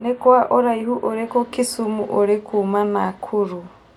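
Speech, with channel delay (comb filtering) from 0.00 to 1.27 s: one channel lags by roughly a tenth of a millisecond, so summing cancels energy near 5 kHz, sounding hollow.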